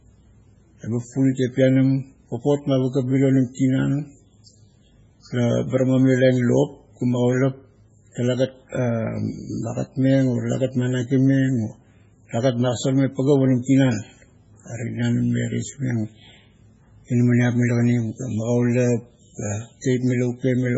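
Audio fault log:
throughout, MP3 compression: the speech has the watery, swirling texture of a codec starved of bits, likely from MP3 encoding at a very low bitrate of around 16 kbps, with heavy damage. The encoder drops everything above 7.7 kHz, so the sound is dull. Quiet frequency lines that cannot be afforded are zeroed and return from frame to frame, which leaves sibilants metallic and chirpy and blurs consonant onsets.
19.81 to 19.84 s, pre-echo: near the end of the speech, a sharp onset falls late in a transform block. The quantisation noise that the codec spreads across the whole block was sized for that loud attack, and it also fills the quiet stretch in front of it. A brief hiss of about 31 ms therefore comes before the attack, and the onset itself sounds softened and smeared rather than crisp.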